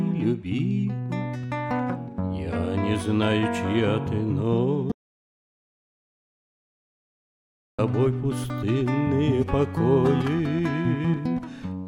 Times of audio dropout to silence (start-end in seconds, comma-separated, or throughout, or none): 4.92-7.79